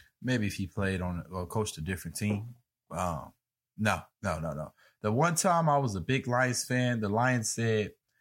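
Nothing stood out as a technical fault on listening to this speech recording.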